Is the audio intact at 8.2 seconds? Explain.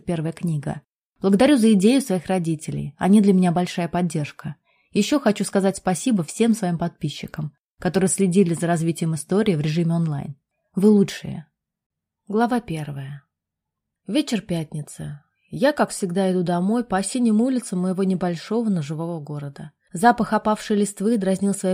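Yes, the audio is intact at 8.2 seconds, with no dropout, click, distortion or other fault at that point.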